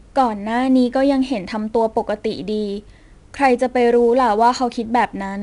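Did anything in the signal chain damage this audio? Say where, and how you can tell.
Yes, at the codec stage: the speech carries 4-bit ADPCM compression from start to finish. A gritty hiss rides on every louder syllable and falls away in quieter moments, because the quantisation error follows the signal level. Consonant onsets are roughened where the adaptive step size lags a sudden rise. Nothing is present above about 10.6 kHz, which points to a sample rate near 22 kHz and explains the dulled top end.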